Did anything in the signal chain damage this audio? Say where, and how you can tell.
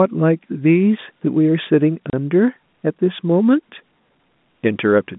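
Yes, at the network stage: a 30 ms hard-edged silent gap at 2.1 s, packet loss filled with silence, which fits a single lost packet on this band-limited G.711 telephone line.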